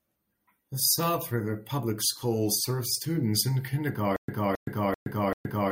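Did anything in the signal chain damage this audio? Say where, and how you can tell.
Yes. From 4.16 s to the end of the speech, the playback or streaming stage shows a stutter with silent gaps. The same 269 ms fragment repeats four times, each followed by about 120 ms of digital silence, giving an even cycle of 389 ms. That regular replay-then-empty pattern is the signature of a stalled player. It likely re-issued its last buffered chunk on each retry, then ran dry, so the speech that belonged in that stretch never plays.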